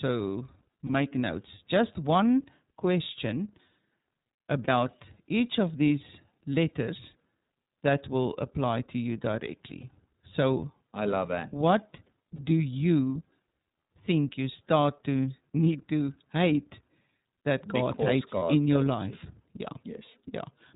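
Throughout, the speech carries iLBC codec damage. Nothing above 4 kHz survives, and the voice sounds rough and faintly synthetic. A spectrogram shows a hard ceiling at 4 kHz, and the plainly audible coarseness fits iLBC's 13.33 kbps mode with 30 ms frames.

Lost iLBC frames interrupt the speech at 0.87, 4.65, 9.80, 12.36 and 18.39 s. Each gap lasts about 30 ms, which fits one dropped frame. The decoder fills it by repeating the last pitch cycle blended with noise, so you hear a brief held, buzzy or breathy vowel before normal speech returns at once. On a waveform, each gap appears as a short stretch of near-identical repeated periods. On a spectrogram, the harmonics go flat and smeared for that slice.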